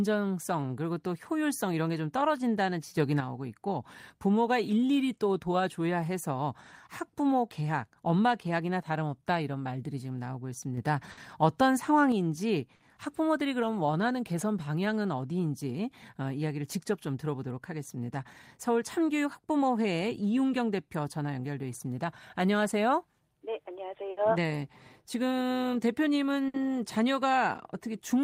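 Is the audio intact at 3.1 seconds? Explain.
No. From 2.97 to 3.20 s the speech and its background noise jump up together by about 6 dB, with an abrupt step rather than a swell. This sudden gain jump is likely a digital gain change applied between adjacent samples without any ramp.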